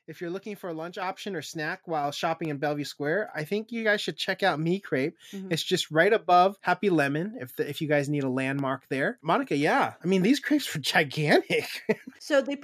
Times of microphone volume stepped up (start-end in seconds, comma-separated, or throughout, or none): 1.02, 2.04